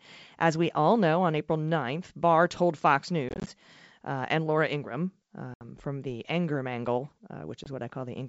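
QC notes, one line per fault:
3.29–3.50 s, 5.54–5.64 s, 7.64–7.68 s, packet loss on an ADPCM call: dropped packets were replaced by silence, leaving hard-edged holes. First, about 100 ms is lost in short bursts before "uh and". Second, a 70 ms gap comes before "from the". Third, a brief 20 ms gap. Afterwards the decoder's predictor and step size no longer match the sender's, so the sound returns slightly distorted before settling.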